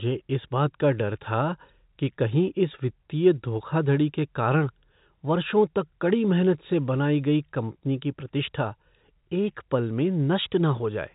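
No faults can be heard anywhere in the recording.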